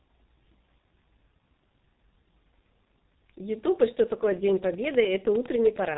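A speech clip carrying heavy G.723.1 codec damage from start to finish. Energy stops sharply at 3.8 kHz on a spectrogram, consonants smear, and the voice turns muffled and hoarse, consistent with a coarse, slow-updating voice model running near 6 kbit/s.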